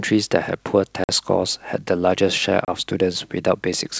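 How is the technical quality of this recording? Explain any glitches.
Two short dropouts are the main problem, sitting on top of what sounds like G.722 wideband coding, which keeps speech crisp up to about 7 kHz.

Both are packet loss on an ADPCM call: a 50 ms hole at 1.04 to 1.09 s (a handful of packets) and a 30 ms one at 2.65 to 2.69 s. Each cuts abruptly to silence. Because the receiver's predictor and step size lose track of the sender's, speech comes back slightly distorted before settling.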